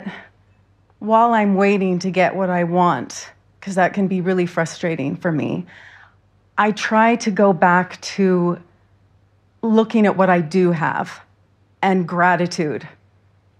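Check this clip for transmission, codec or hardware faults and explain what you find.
No faults can be heard anywhere in the speech.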